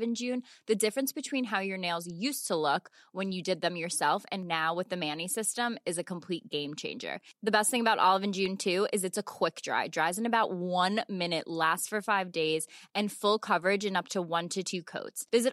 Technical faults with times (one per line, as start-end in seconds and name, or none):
8.46 underrun with held sample